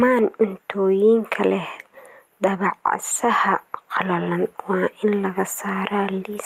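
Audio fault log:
throughout, gain pumping: the gain ducks by about 5 dB under each loud syllable, likely a fast limiter reining in gain set too high. The waveform envelope looks flattened.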